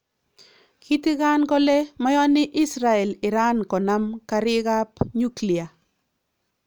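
No technical faults can be heard in the speech, so there is nothing to describe in time order.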